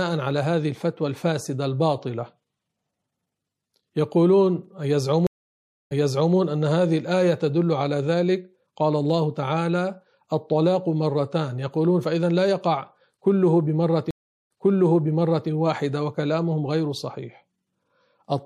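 Speech runs through with a watery, swirling edge. Sibilants chirp metallically. The likely cause is MP3 compression, and the damage fits a low bitrate of around 64 kbps. Weak frequency lines blink on and off between frames. There are two stream reconnects. At 5.27 s the sound drops out for 0.64 s, then resumes 0.44 s earlier, repeating what came before. At 14.11 s a 0.39 s silence follows, and playback restarts 0.99 s back. In each case a fresh decoder picks up mid-stream.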